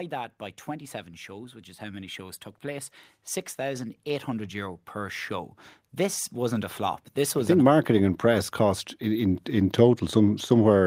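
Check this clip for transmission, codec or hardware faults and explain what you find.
Automatic gain rising occurs twice: the gain control, hearing a quiet input, ramps up about 4 dB from 1.26 to 2.97 s, then about 10 dB from 3.55 to 9.31 s, so speech and background swell together.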